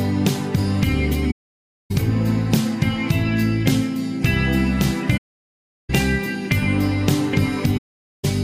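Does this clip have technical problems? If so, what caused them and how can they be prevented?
Yes. The sound drops into silence three times, from 1.31 to 1.91 s, 5.17 to 5.90 s and 7.77 to 8.25 s, with gaps of about 0.6, 0.73 and 0.47 s. Each gap fades out and back in smoothly. This is AAC frame loss with muting: a run of consecutive frames went missing, the decoder zeroed their spectrum, and the overlapping transform windows softened both edges of each hole. Sending the stream over a more reliable link, or adding forward error correction or retransmission, would keep those frames from being lost.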